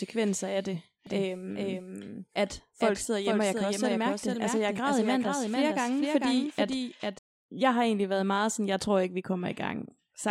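From 1.07 s, just after "af det", the speech carries a doubled audio track: a second full-band copy trails the original by about half a second, only around 5 dB quieter, with no decay or room colour, likely from a slower capture path or misaligned edit. It cuts out abruptly at 7.19 s, before "jeg har egentlig været". A spectrogram shows every syllable's pattern repeated half a second later; the waveform shows overlapping, offset envelopes.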